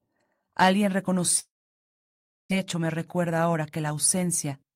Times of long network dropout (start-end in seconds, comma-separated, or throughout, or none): 1.39-2.53